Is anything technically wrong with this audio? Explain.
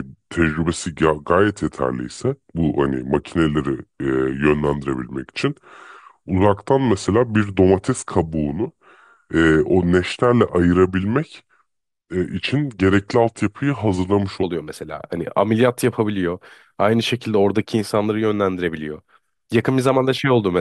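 Yes. From 0.0 to 14.43 s there is a section at the wrong speed: the speech runs at 0.818 times its recorded rate, likely from playback against a slower clock. Speed and pitch drop together, so the voice sounds slow, drawn out and roughly four semitones deeper.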